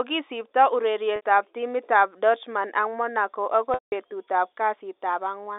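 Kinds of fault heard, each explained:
Packet loss with pitch repetition: lost audio is patched by looping the last pitch cycle, giving a brief buzzy hold at 1.16 s and a fade to silence during a 180 ms loss at 3.74 s.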